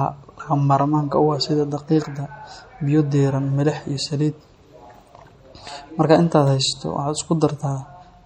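Throughout, the speech has a watery, swirling treble that is plainly audible, likely from MP3 compression at a bitrate near 48 kbps, unlike a steady low-pass filter's fixed dullness.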